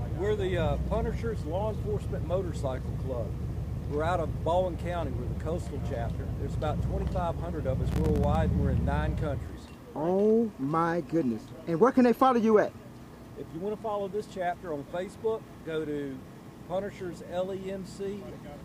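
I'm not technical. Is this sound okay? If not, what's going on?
No. From about 7.89 to 8.35 seconds there's a burst of processor overload crackle, a gritty tearing lasting roughly half a second. The computer was too busy to deliver each tiny slice of sound, a few thousandths of a second long, on time. About a dozen or more slices during that stretch came out as brief silences with hard edges. A single dropout would be one clean gap. Here many rapid gaps pile up into a crackle that stops once the computer catches up.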